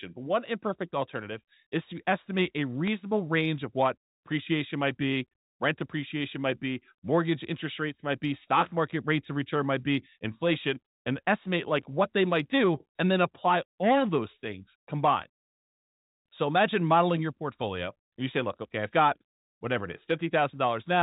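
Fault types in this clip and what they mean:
Bit errors on a digital phone line: a brief error in one frame at 2.87 s, between "is to estimate a" and "range of what appreciation". A flipped sign or high bit on this mu-law phone line throws one sample far from its value, at a very low error rate.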